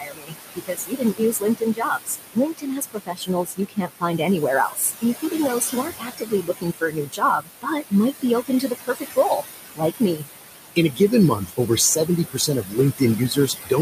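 Throughout, the noise suppressor cuts what it takes for steady noise by about 18 dB, frame by frame. The room noise, itself about 8 dB below the speech, sinks in the pauses and rises again under the speech. These are noise suppressor artifacts.

From 0.0 to 9.43 s the suppressor mistakes parts of the speech for noise and turns them down by up to about 22 dB, over roughly five seconds in total, so they sound swallowed or faint. The same speech cut by the noise suppressor returns from 9.75 to 10.24 s, for roughly 0.2 s, and from 10.76 s to the end, both times reaching about 20 dB.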